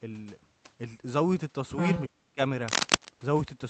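Speech clip carried over an Opus call link whose top end stops near 8 kHz. From 1.78 to 2.03 s a second voice at roughly the same level as the talker comes through, other side's voice leaking through, likely from residual echo the canceller failed to remove. Between 2.06 and 2.39 s the talker's speech drops sharply, by around 40 dB at its deepest, over about a third of a second. This is speech suppressed in double talk, likely where the canceller attenuated the near voice while both sides overlapped. From 2.68 to 3.09 s dense, uneven scratching sits roughly 5 dB above the signal. This is cable scratch noise, consistent with a worn cable or connector being moved.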